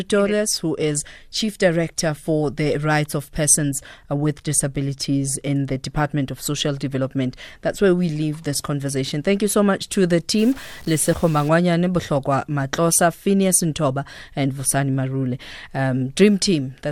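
From 10.39 to 11.49 s, after "so much to the", a stuck bit, likely a fixed data line, adds harsh, buzzy distortion, with waveform steps of about -35 dBFS and broadband haze on the spectrogram.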